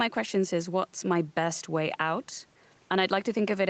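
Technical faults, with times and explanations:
No technical faults can be heard in this speech clip. It carries the narrowed sound of a call path, with nothing above about 8 kHz, which fits an Opus codec at around 24 kbps working as expected.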